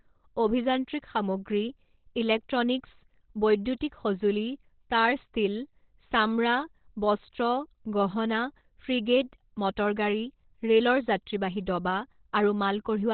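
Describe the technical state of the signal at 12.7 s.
At 12.7 s the speech sounds muffled and hoarse, with nothing above about 4.3 kHz. As across the whole clip, this is likely heavy Opus compression in its narrowband SILK speech mode, which points to a rate near 12 kbps.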